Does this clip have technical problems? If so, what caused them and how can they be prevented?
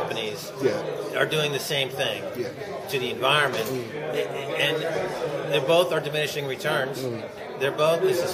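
No technical problems are audible.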